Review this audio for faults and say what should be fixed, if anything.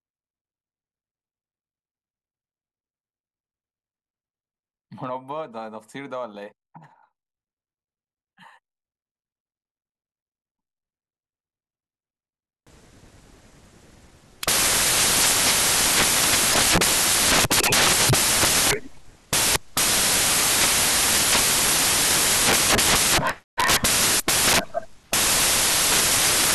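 From 12.67 s to the end of the speech, the samples are built from the wrong bytes: the reader assembles each sample with its bytes misaligned or in swapped order, so the rapidly changing low-order bits land in the most significant positions. The result is loud, harsh broadband noise, close to white on the louder speech. To prevent it, fix the byte order and frame alignment in the reader and validate them against the stream header.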